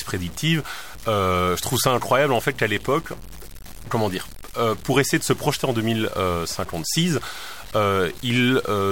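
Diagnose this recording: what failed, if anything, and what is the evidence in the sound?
Sample-format conversion: grainy distortion tracks the speech throughout and quiet tails sputter out, likely low bit depth without dither, truncated to 6 bits; the waveform shows stair-steps.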